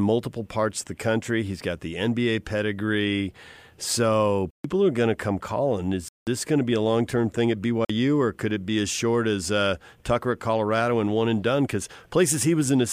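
Blocks of digital silence fall at 4.51 to 4.64 s (about 140 ms, after "pedigree so"), 6.08 to 6.27 s (about 186 ms, after "going to come calling") and 7.85 to 7.90 s (about 46 ms, after "long term thing at"). Each time, output samples were zeroed, most likely because the buffer wasn't filled in time. The second and third gaps fit blocks of 8192 and 2048 samples. The sound drops out abruptly, so each gap is heard as a short hole.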